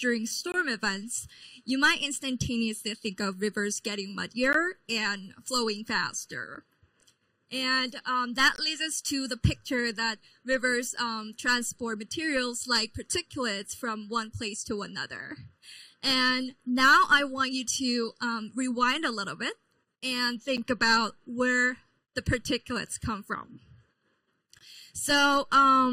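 One channel arrives a fraction of a millisecond late and the two are summed to mono, so this channel delay (comb filtering) runs throughout. It carves evenly spaced notches starting around 700 Hz, leaving the whole sound hollow and phasey. Separately, segment timestamps leave gaps between stream segments at 0.52–0.54 s, 4.53 s, 6.55 s, 8.56–8.58 s, 20.57 s and 24.59–24.61 s. The player fills each with silence, giving hard-edged dropouts of roughly 6 to 20 ms that land on a 2-second segment grid without losing any audio.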